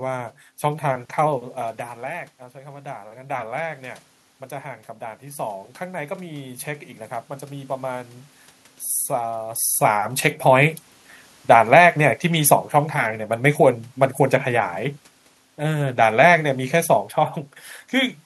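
Automatic gain rising runs from 2.02 to 8.18 s in this speech recording. At about 1.5 s the talker moves away and the level at the microphone drops by about 13 dB. The gain control then climbs slowly, adding about 7 dB over six seconds, so the voice and the room noise behind it swell up together. Automatic gain falling follows from 9.79 to 18.2 s, after the talker moves at about 9.5 s. The control pulls its gain down by about 5 dB, so the speech sinks gradually along with the room noise.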